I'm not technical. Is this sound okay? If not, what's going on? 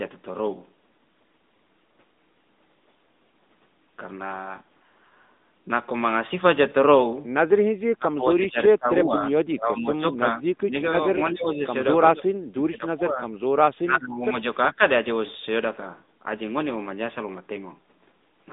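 No. The whole recording has passed through the AMR narrowband mobile codec, the phone system used on older mobile networks. It throws away everything above about 3.8 kHz, so the speech sounds muffled and boxy, with a buzzy, artificial edge. Unlike a simply poor microphone, that synthetic buzz comes from the phone compressing the speech.

The speech also keeps sinking or partly vanishing at 7.95 to 9.32, 9.55 to 11.04, 11.31 to 11.62, 12.14 to 13.29, 13.82 to 14.36, and 14.68 to 14.8 seconds. The likely cause is speech suppressed in double talk: both people spoke at once, and the phone's echo cancelling turned this talker down. Unlike a bad connection, the speech dips in volume rather than stuttering or garbling.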